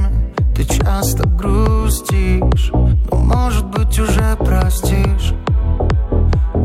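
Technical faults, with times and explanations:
2.84–2.93 s: compressed frames skipped. Frames went missing or were rejected as damaged, so the audio jumps ahead roughly 50 ms.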